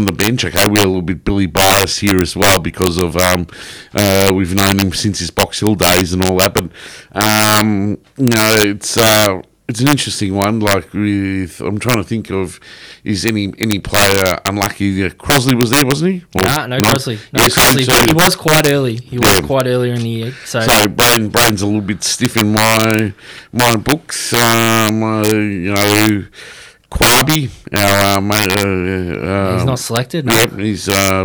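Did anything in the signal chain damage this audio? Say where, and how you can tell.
Yes. Integer overflow damages this speech throughout, most likely at a fixed-point gain or sample-format conversion stage driven about 8 dB too hot. A small fraction of samples wraps to the opposite sign, giving harsh cracks on loud syllables, unlike clipping's flattened, duller distortion.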